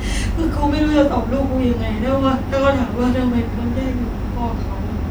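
No technical fault can be heard anywhere in the speech signal.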